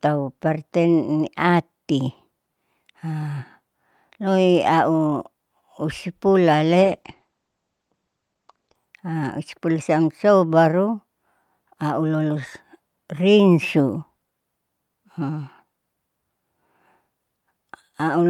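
At 6.83 s the speech drops in quality through a call bitrate drop that lasts until about 8.83 s. The bandwidth estimate fell, and the encoder cut its bit budget sharply. The coarse, rough texture points to a rate falling from around 64 kbps to roughly 12 kbps. The audio bandwidth narrows from 20 kHz to 8 kHz, so the speech sounds muffled. It stays at its lowest for about 1.9 s before recovering.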